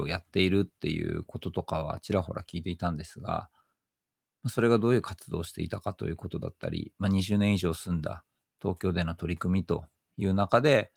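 The speech signal has no technical faults, and its Opus voice compression, running at 24 kbps in hybrid fullband mode with 20 ms frames, leaves only light coding traces.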